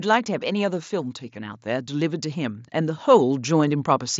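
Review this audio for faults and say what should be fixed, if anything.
Automatic gain rising runs from 0.05 to 4.15 s: the gain control judged the speech too quiet and gradually raised level by about 8 dB, lifting speech and background together. The audio passes through a wideband Bluetooth mSBC headset path, with nothing above about 7.7 kHz. To prevent this, fix the input gain at a suitable level and disable or slow the automatic gain control.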